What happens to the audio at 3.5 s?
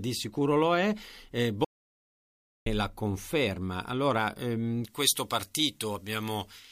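Nothing goes wrong at 3.5 s; the speech continues intact through that moment.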